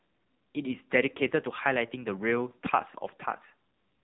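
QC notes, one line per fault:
throughout, AMR narrowband mobile codec: speech passed through the narrowband mobile codec at a starved bitrate, consistent with its 6.7 kbps mode. Nothing above 3.8 kHz survives, so the voice sounds dull and boxed-in, and the sparse pulse-driven vocal-tract model leaves it heavily buzzy and synthetic.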